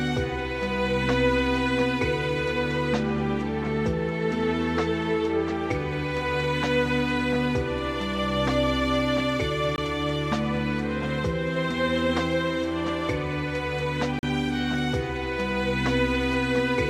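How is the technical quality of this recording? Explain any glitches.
Two short dropouts stand out. There's a block of digital silence at 9.76 to 9.78 s (20 ms) and again at 14.19 to 14.23 s (40 ms), likely where the output buffer wasn't filled in time and got zeroed. You hear a short hole each time, and the second is longer.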